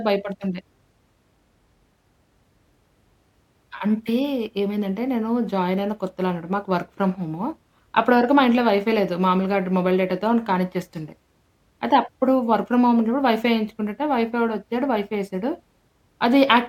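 No technical faults can be heard anywhere in the speech. Nothing in the audio points to a problem in how it was captured, processed or delivered.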